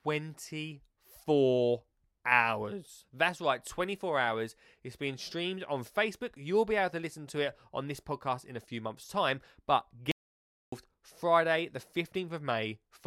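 An audio dropout to silence runs from 10.12 s to 10.72 s in this speech recording, lasting about 0.61 s. The sound stops abruptly mid-flow and the gap is dead silence, with no room tone or background underneath, before the speech resumes just as suddenly. Whatever was said across that stretch is missing. The likely cause is a brief loss of the input signal, such as a momentary disconnect or mute, while recording continued writing silence.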